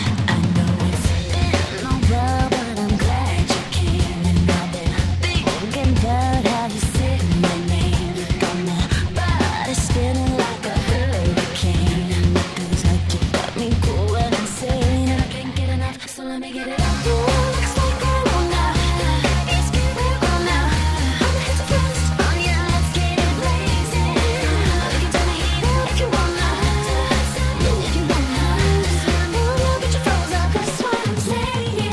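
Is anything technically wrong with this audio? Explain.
No, no technical faults here.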